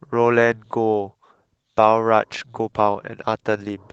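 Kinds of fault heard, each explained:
Lost packet rebuilt from error correction: at 2.63–2.69 s, low-bitrate backup copies replace lost audio, sounding rougher and noisier; the spectrogram shows grainier, blurred texture without any gap.
Short concealed packet loss: at 2.71–2.74 s the decoder extends the preceding sound to bridge a hole, heard as a brief smear; the waveform shows a smoothed stretch.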